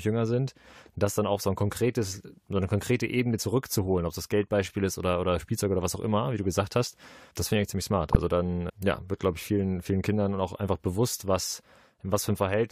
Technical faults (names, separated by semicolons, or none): compressed frames skipped